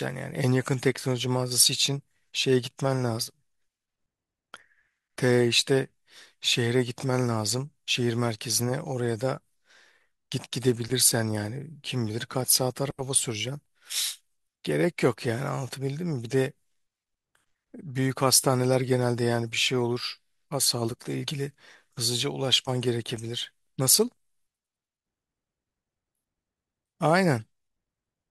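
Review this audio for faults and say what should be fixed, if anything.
Ticks every 0.5 s from 23.16 to 25.67 s are periodic USB or driver dropouts: a recurring background task briefly blocks audio, silencing about a millisecond each time. To prevent this, find and disable the polling process or driver hogging the bus, and use a larger audio buffer or a dedicated USB port.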